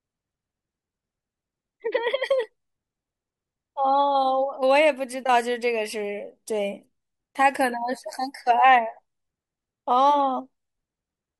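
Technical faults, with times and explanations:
4.30 s, bit error spike: one sharp broadband tick in the speech, about -36 dBFS, where a single flipped bit pushed one sample's value off and back.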